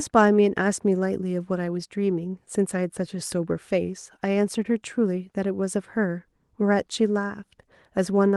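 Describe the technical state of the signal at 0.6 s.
At 0.6 s the speech signal is intact, with no dropout, glitch, clipping or other fault.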